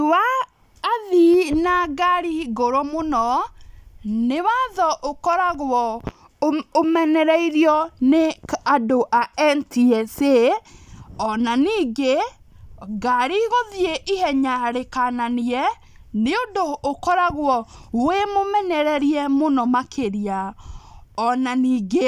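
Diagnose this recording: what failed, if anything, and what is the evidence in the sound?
Nothing in the speech recording stood out on listening as a failure at any stage of the chain.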